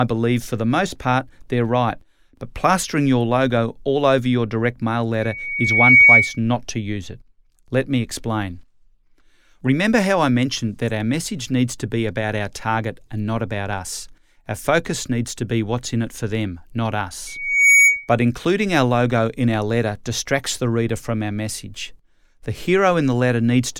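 A speech clip with two bursts of loudspeaker feedback squeal, from 5.20 to 6.40 s (after "over your direct mail") and from 17.27 to 18.09 s (after "it for them not"). Both times a microphone picks up its own loudspeaker and a single 2.3 kHz tone swells over a fraction of a second to roughly 10 dB above the speech. Unlike a steady interfering whistle, it grows from nothing and returns at the same pitch.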